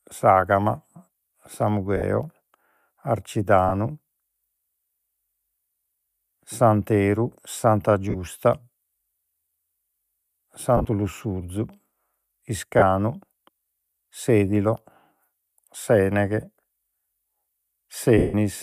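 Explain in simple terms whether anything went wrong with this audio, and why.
Lost LE Audio frames cause brief glitches at 1.97, 3.69, 8.10, 10.77, 12.79 and 18.18 s, where missing Bluetooth packets were patched over. Unlike a clean dropout, each short gap becomes a noisy smear instead of silence. The 160 ms one at 18.18 s fades out gradually into silence.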